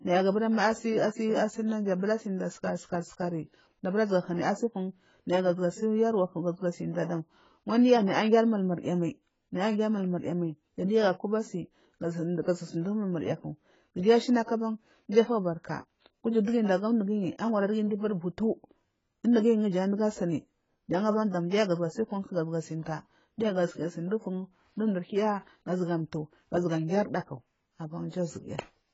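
AAC compression runs throughout this speech, which has nothing above 7.6 kHz and sounds heavily dull and smeared, likely from AAC-LC at a bitrate that fits about 16 kbps.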